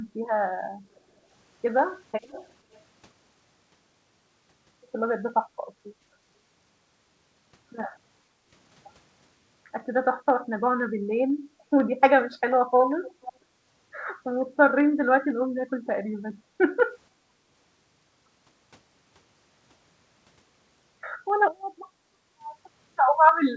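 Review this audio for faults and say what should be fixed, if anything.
Periodic USB or driver dropouts run from 0.29 s to the end of the speech, one every 0.5 s. Each time a tiny slice of audio is skipped rather than replaced with silence, so the waveform jumps and leaves a short tick. The ticks are audible only while signal is present and keep a rigid half-second rhythm, which points to a background task stalling the USB bus or audio driver on a fixed timer. To prevent it, find and reschedule the periodic task, or raise the audio thread's priority and buffer headroom.

Background gated by the echo canceller occurs at 0.81–1.19 s (dip of about 10 dB), 8.3–8.46 s (about 7 dB), 16.35–16.66 s (about 12 dB) and 17.11–17.47 s (about 7 dB). In each case the room tone sinks briefly and then recovers. The echo canceller's suppressor is clamping the microphone while far-end playback is active. 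To prevent it, lower the suppressor's aggressiveness or add comfort noise so the background stays steady.

A delayed copy of the speech appears about 0.49 s after the original at 0.95–1.0 s, 2.22–2.5 s, 2.72–2.78 s and 13.02–13.33 s. It is barely there in the first and third instances, clearer at 2.22 s, and most noticeable at 13.02 s. This is likely echo leak: loudspeaker playback reached the far side's microphone and was not fully cancelled before being sent back. To prevent it, use a headset at that end or give its echo canceller a correct delay estimate.

The call path runs at G.722 with nothing above 8 kHz, which fits a 64 kbps wideband setting.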